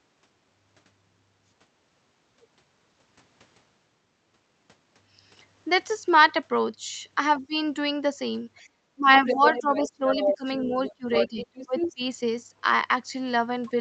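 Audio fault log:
7.39–7.54 s and 8.63–12.09 s, speech suppressed in double talk: the echo canceller likely mistook overlapping far-end audio for its own echo and attenuated the talker, so the speech dips briefly by about 20 dB, then by up to about 25 dB, for roughly 1.65 seconds in total.
9.12–11.94 s, other side's voice leaking through: the echo canceller likely left residual loudspeaker echo in the microphone signal, so a second voice is audible underneath, only about 5 dB below the talker, competing with the speech across nearly three seconds.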